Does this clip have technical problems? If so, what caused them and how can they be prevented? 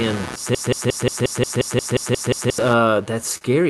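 Yes. A computer activity noise runs through the whole speech clip: a buzz pulsing at roughly 150 Hz, only about 10 dB below the speech, that tracks the processor and mouse load through the shared ground. On a spectrogram it shows as a comb of vertical ticks. Use a USB isolator or external interface to break the ground loop.

From 0.55 s to 2.58 s there is a broken-record loop: one fragment about 0.18 s long repeats eleven times back to back, likely because the player or stream stalled, and the speech due in that span is lost. The waveform shows identical repeating blocks. Larger buffers and a watchdog that restarts stalled streams prevent this.

At 3.37 to 3.44 s a short stall from a late packet holds a sound for 37 ms while the jitter buffer waits, then resumes with nothing skipped. A spectrogram shows a smeared, flat stretch. A larger or adaptive jitter buffer absorbs such delay changes.

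The Opus call path, with its 12 kHz bandwidth, is visible as an empty band above that limit.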